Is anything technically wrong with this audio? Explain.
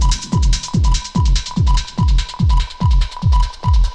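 No, nothing technically wrong can be heard in this audio. There is no fault to report anywhere in it.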